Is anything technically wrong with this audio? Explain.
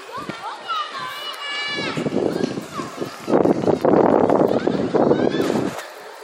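Yes. From 3.14 to 4.79 s there's a train of clicks: about twenty evenly spaced ticks, 10.4 per second, peaking about 5 dB over the audio, likely from nearby equipment interference.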